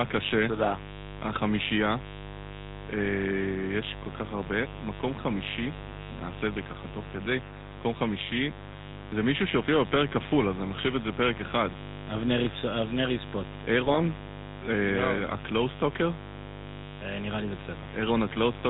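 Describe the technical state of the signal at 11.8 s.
At 11.8 s the speech carries two faults. Both run through the whole clip, not just this moment.

The first is mains buzz at 50 Hz. Switching spikes let in by a dimmer, rectifier or missing shield leak in twice per mains cycle, so the interference repeats 100 times a second. Its harmonics stack up well into the kilohertz range. The result is a steady, raspy buzz sitting about 15 dB below the speech.

The second is GSM full-rate codec damage, plainly audible here. The character fits the 13 kbit/s full-rate coder. It rebuilds the voice from a vocal-tract model driven by evenly spaced pulses and keeps only a thinned-out excitation. Nothing above 4 kHz survives, so the speech sounds dull and band-limited. The pulse-driven excitation gives the voice a buzzy, gravelly roughness.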